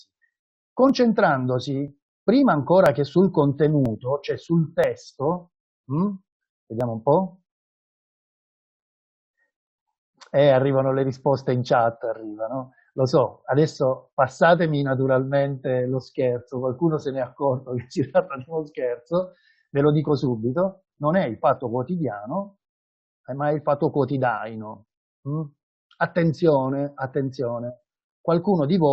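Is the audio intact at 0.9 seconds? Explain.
No. At 0.9 s there is an overlap between stream segments. The player discards a few milliseconds where two segments overlap, so the waveform jumps, heard as a tiny skip.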